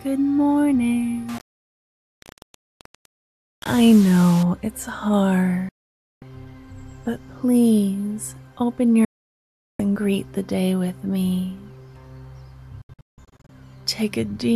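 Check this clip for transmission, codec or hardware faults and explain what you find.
Two faults are present. From 1.29 to 4.43 s, low bit depth without dither, likely about 5-bit rounding, makes signal-following error that sounds gritty and grainy, roughly 20 dB down.

Digital broadcast dropout: lost frames muted the receiver at 5.69–6.22 s, 9.05–9.80 s and 12.82–13.50 s. The sound snaps to silence, with the last dropout broken into short holes.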